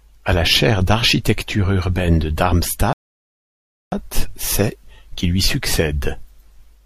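A rebuffering stall runs from 2.93 s to 3.92 s in this speech. The player exhausted its downloaded audio and halted, leaving 0.99 s of silence, then picked up exactly where it stopped with "c'est qui lui". Nothing is skipped; the pause simply lengthens the clip.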